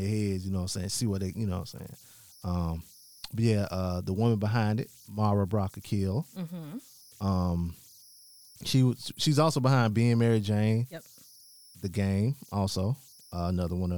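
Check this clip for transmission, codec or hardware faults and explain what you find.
There's one hardware fault, and it runs through the whole recording: converter idle tones. A faint whistle sits somewhere around 5 kHz, roughly 30 dB below the speech, and it's easiest to catch in the pauses. The converter seems to be a delta-sigma type running without dither, so when the input gets small it locks into repeating bit patterns. Those patterns turn into that tone, which also leaves a grainy texture under the quieter stretches of speech.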